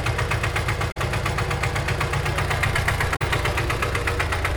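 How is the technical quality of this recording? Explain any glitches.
Two short glitches break the recording. Damaged data in a compressed stream occurs at 0.88 to 0.97 s and again at 3.12 to 3.22 s. Corrupted bytes make the decoder misread frames and lose sync until it finds the next frame header, so each roughly 0.1 s gap comes out as a brief chirp, squawk, click or short hole.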